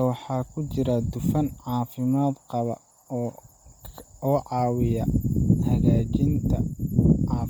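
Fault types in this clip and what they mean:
Bluetooth LC3 compression: the speech was likely coded heavily with LC3, in a way that fits 32 kbps and 10 ms frames. Much of the upper spectrum is dropped and refilled with noise, making the voice breathy and grainy throughout, with nothing above 20.1 kHz.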